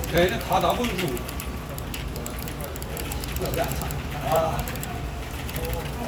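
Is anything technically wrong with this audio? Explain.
Yes. Clock drift buffer slips, likely from two devices on independent clocks differing by roughly 1000 ppm, cause a buffer to drop or repeat a few dozen samples at a time. This is heard as a regular click roughly every 0.84 s from 0.16 s to 6.05 s, about seven in all.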